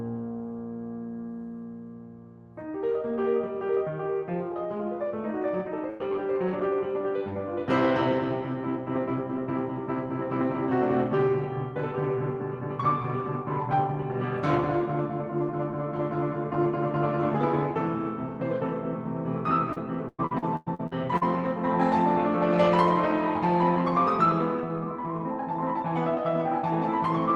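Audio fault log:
5.89–6.02 s, burst of packet loss: several packets in a row went missing, so the receiver extended the last music for about 100 ms while fading it down, then resumed with about 60 ms skipped. On a spectrogram, smeared, steady harmonics fade before an abrupt restart. On the waveform, a decaying envelope precedes a sharp discontinuity.
5.99, 6.11, 6.47 and 6.59 s, lost packet rebuilt from error correction: four separate 60 ms packets were lost, and each was replaced by the low-bitrate Opus copy carried in the next packet. There is no gap, but each patch sounds grainier and noisier. A spectrogram shows 60 ms blocks with blurred texture and a raised noise floor. The waveform looks continuous, with slightly altered detail.
19.73–21.23 s, repeated packet loss (robotic sound): eight holes hit this 1.5 s stretch, the longest 104 ms. Concealment covered about 30 percent of the span, and some of it was rebuilt from correction copies. 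Around 440 ms of music is missing, so the passage sounds choppy. A spectrogram shows alternating smeared and clean slices. The waveform shows repeated fading segments and jumps.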